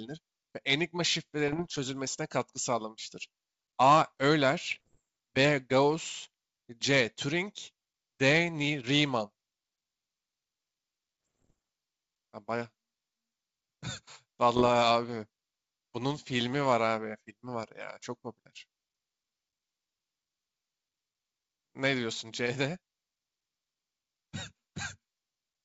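Bit errors on an ADPCM link at 1.48–1.78 s, 4.72–5.00 s, 11.26–11.53 s and 14.56–14.69 s: flipped bits, well under one percent, derail the decoder's step size and predictor, leaving pops and rough bursts with brief level jumps.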